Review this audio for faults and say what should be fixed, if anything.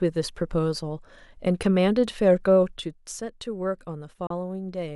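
A digital broadcast dropout cuts the speech from 4.27 to 4.31 s. The receiver hit a corrupt or missing frame and muted with a quick fade of about 3 ms. Roughly 32 ms of sound is lost, which fits one dropped frame. Stronger reception or more robust error protection on the link would prevent it.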